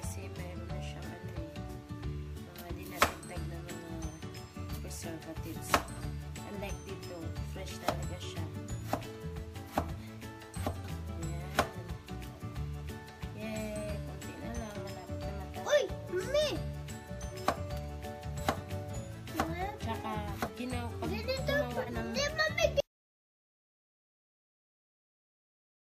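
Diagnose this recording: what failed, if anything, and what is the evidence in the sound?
Compressed frames skipped, at the codec or storage stage: short smeared blips at 9.55–9.59, 17.30–17.34, 18.93–18.96, 20.46–20.50 and 21.85–21.88 s, each a forward jump of roughly 100 to 200 ms, a few frames of about 46 ms each. The overlap between frames softens each join, so it lacks the hard click of lossless frames.

Audio dropout to silence: from 22.80 s to the end the sound stops dead into silence, with no room tone or decaying tail. That rules out a fade or a gate. The likely cause is lost input at the capture stage while recording continued.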